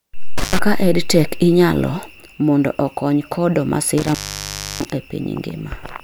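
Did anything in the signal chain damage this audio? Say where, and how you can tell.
Yes: intermittent contact in the analogue wiring, at 0.38 to 0.59 s and 3.98 to 4.90 s, where a loose connection drops the speech, briefly then for about 0.66 s, with crackle.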